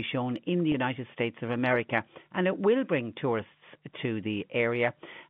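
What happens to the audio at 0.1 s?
Nothing goes wrong at 0.1 s: the speech continues intact, carried normally through the telephone-band G.711 coding.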